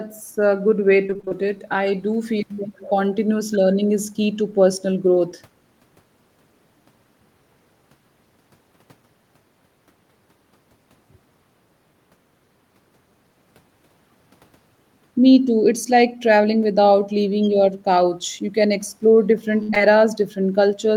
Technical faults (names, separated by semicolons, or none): repeated packet loss (robotic sound); short concealed packet loss